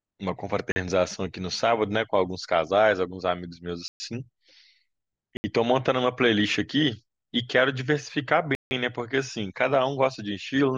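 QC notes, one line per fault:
0.72–0.76 s, block of digital silence: the sound drops to silence for 40 ms. It cuts out and back with no fade.
3.88–4.00 s, block of digital silence: a 120 ms hole. It cuts in and out with no fade.
5.37–5.44 s, block of digital silence: the speech vanishes for 70 ms. It is heard as a short gap.
8.55–8.71 s, block of digital silence: the longest gap, 160 ms. It is heard as a hole.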